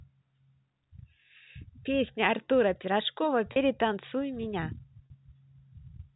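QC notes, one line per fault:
3.52 s and 5.06 s, packet loss with pitch repetition: each 40 ms gap is filled with a briefly held, buzzy repeat of the last pitch period, which fits two lost 20 ms packets, over the narrow G.711 telephone band.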